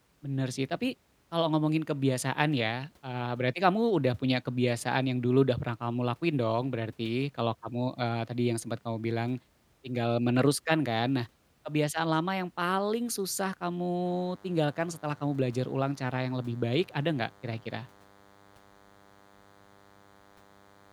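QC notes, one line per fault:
14.05–20.93 s, DECT cordless phone buzz: a thin, steady buzz enters and runs to the end, about 30 dB below the speech. A nearby DECT handset or base transmits bursts 100 times a second, which the audio circuitry rectifies into a harmonic-rich 100 Hz tone.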